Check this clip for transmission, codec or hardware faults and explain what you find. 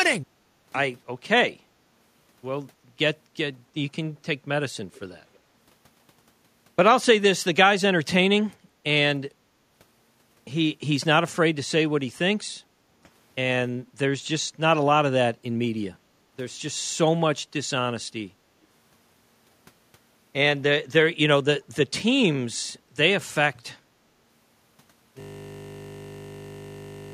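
Two kinds of fault turn up: a faint echo leak early on and a system hang loop that runs to the end of the clip.

Echo leak, 4.93 to 5.00 s and 5.34 to 5.39 s: brief, faint delayed copies of the speech arrive 317 ms late, roughly 30 and 40 dB below the direct sound. The likely cause is a far-end loudspeaker whose echo canceller let some of its own microphone pickup return down the line. On a spectrogram, these scraps appear as weak duplicates of earlier harmonic patterns shifted 317 ms to the right.

System hang loop, 25.20 s to the end: a single 20 ms slice of audio repeats exactly, producing a steady 50 Hz buzz instead of speech. The audio stalled while the hardware kept replaying the same ring buffer, which fits a 20 ms buffer. The waveform shows one identical cycle tiled repeatedly, and the spectrogram shows evenly spaced horizontal lines at multiples of 50 Hz.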